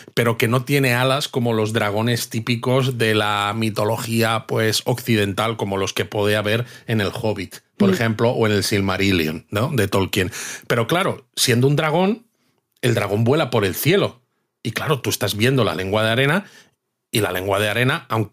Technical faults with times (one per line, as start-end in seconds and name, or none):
0.00-18.33 gain pumping